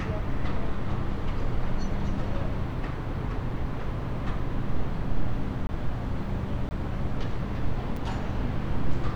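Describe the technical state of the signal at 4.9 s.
At 4.9 s the audio is intact, with no dropout, distortion or other fault at that moment.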